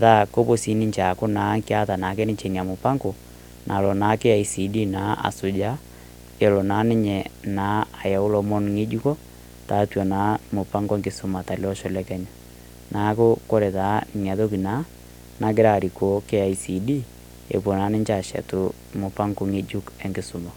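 Video or display buzz runs through the whole speech clip, a harsh 60 Hz buzz sitting roughly 20 dB below the voice with hash above it. A screen or video cable is coupling its picture field rate into the audio, which makes the buzz spikier and more hash-laden than smooth mains hum.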